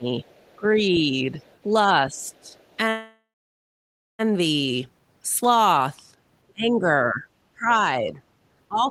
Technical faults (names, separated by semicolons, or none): speech suppressed in double talk; other side's voice leaking through; call audio freeze